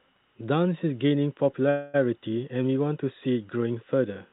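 Speech carried over a call, where packets were likely held up in transit and the jitter buffer ran dry at 1.70 s, producing a call audio freeze. The receiver stretched the last sound into a fading buzz or hiss until 1.96 s, a filled gap of about 0.24 s. The speech then resumes where it stopped with nothing lost, just later than before, over a narrowband line with nothing above 4 kHz, as a 64 kbps G.711 A-law codec would give.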